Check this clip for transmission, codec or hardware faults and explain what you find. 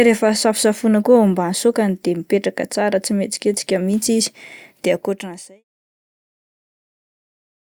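Nothing here points to a transmission, codec or hardware problem; the speech just eases out in a smooth, deliberate fade that begins somewhere around four and a half seconds and is gone by 5.64 s.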